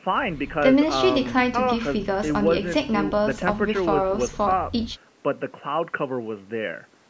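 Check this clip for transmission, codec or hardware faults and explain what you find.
No transmission, codec or hardware faults.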